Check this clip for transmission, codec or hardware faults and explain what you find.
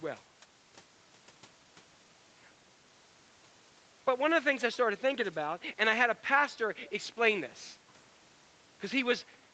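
One fault turns up in the speech, an echo leak, heard twice. The audio stops at 8 kHz, which fits a wideband Opus call path.

Echo leak, 4.6 to 4.75 s and 6.85 to 6.91 s: faint, brief copies of the speech trail the original by about 0.39 s, roughly 25 and 30 dB down. The likely cause is a far-end loudspeaker's echo canceller letting residue return.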